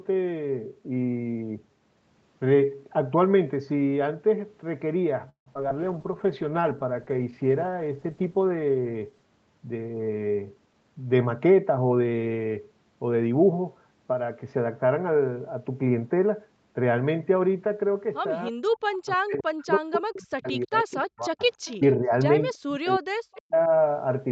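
Recorded speech carried over a call with Opus, band-limited to 8 kHz. Between 5.29 and 5.71 s the network dropped or delayed packets over and over, producing repeated packet loss (robotic sound). The receiver patched four gaps, the longest 169 ms, by stretching the last sound, and concealment fills about 43% of that span. The result is a choppy, metallic stutter with small pieces simply gone.

Right after that, the call's bandwidth estimate collapsed and triggered a call bitrate drop. The encoder fell from 64 to 12 kbps between 5.78 and 9.31 s and stayed at the bottom for about 3.4 s. Coded that coarsely, the speech turns rough and watery, losing its crispness until quality returns near 9.31 s.

Inside that stretch, from 5.98 to 6.27 s, a jitter buffer slow-down occurs. The buffer ran short and padded itself by repeating pitch periods, adding 36 ms. Playback there runs at 91% speed without a pitch change, so sounds drag slightly.

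The reverse happens from 10.66 to 12.14 s as a jitter buffer speed-up. With too much audio queued, the receiver trimmed about 150 ms of short pitch-period slices, and the speech runs at 110% speed, sounding hurried but at unchanged pitch.

Near the end, both ends were talking together, and the echo canceller likely could not tell the local talker from loudspeaker echo, so it clamped down. This speech suppressed in double talk appears from 18.50 to 21.41 s with dips of about 40 dB totalling roughly 3 s. A shorter cut of about 30 dB follows at 21.75 to 22.14 s, and another of about 40 dB at 22.55 to 23.71 s, lasting about a second. In these places the talker fades, thins or drops out in pieces.

Echo leak occurs at 20.92 to 20.96 s and again at 21.65 to 21.76 s. A faint copy of the speech returns 316 ms late, at about 30 dB and then about 25 dB below the main signal. These brief scraps are likely residue the canceller failed to remove from a loudspeaker pickup.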